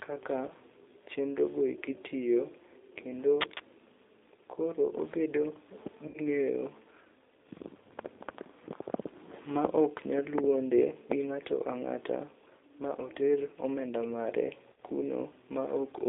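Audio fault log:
throughout, G.729 codec: The speech sounds rough, slightly synthetic and boxed-in. Nothing below 300 Hz or above 3.7 kHz is present, so it is thin and muffled. The damage is plainly audible. At 8 kbit/s, G.729A does not send the waveform. It rebuilds each short frame from a vocal tract filter, a pitch predictor and a few coded pulses, and that sparse reconstruction gives the buzzy, artificial grain.
0.48–0.52 s, 6.08–6.19 s and 14.73–14.81 s, VoIP packet loss concealed by the speech codec: The sound briefly smears into a buzzy or hissy stretch that fades. It happens just before "chenrogo eki tiyo kendo", in a longer patch near 6.1 s, and just after "ma oter omenda mare". About 10 ms, 60 ms and 60 ms of audio were lost. In the last case the loss was scattered over 80 ms, with a longest gap of 50 ms. The decoder filled each gap by repeating its last pitch and filter with falling gain, and the sound stays weak or distorted for tens of milliseconds as it recovers.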